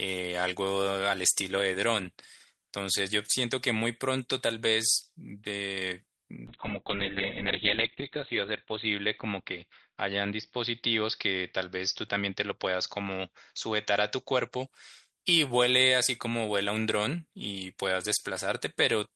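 Speech turns muffled and rough from 6.48 to 14.72 s, a call bitrate drop that fits the encoder falling from about 32 to 7 kbps and losing everything above 4 kHz.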